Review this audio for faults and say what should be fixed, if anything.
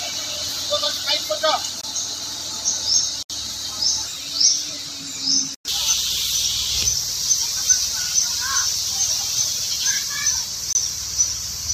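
Block of digital silence at 1.81–1.83 s, 3.23–3.30 s and 10.73–10.75 s: the audio drops abruptly to silence and returns with no fade. The two 23 ms holes fit a 1024-sample buffer left unfilled in time. The 70 ms gap spans several blocks. Prevent it by giving the audio thread more headroom, with a larger buffer or lighter per-block processing, so every buffer is filled before its deadline.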